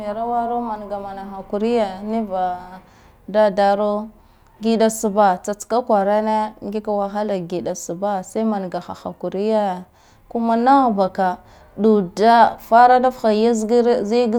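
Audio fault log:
No faults detected.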